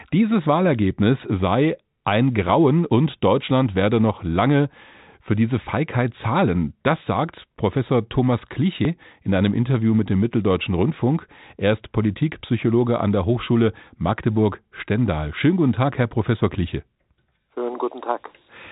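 It's a speech recording over a telephone-band line, with nothing above 3.8 kHz. There are two abrupt skips at 2.90 and 8.85 s, each dropping about 50 ms with the edges butted together. Audio missing between chunks is the likely cause, with the recorder losing a sliver at each 6-second chunk boundary.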